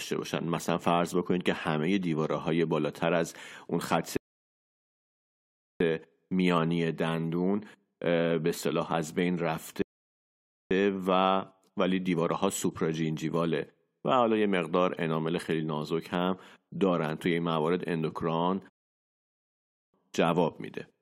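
Rebuffering stalls interrupt the speech three times: from 4.17 to 5.80 s, from 9.82 to 10.71 s, and from 18.70 to 19.94 s. Each time the player exhausted its downloaded audio and halted until more data came in, so the speech drops to silence and then picks up at exactly the point where it stopped. No speech is skipped. The gaps simply add about 1.6 s, 0.9 s and 1.2 s of dead air to the playback.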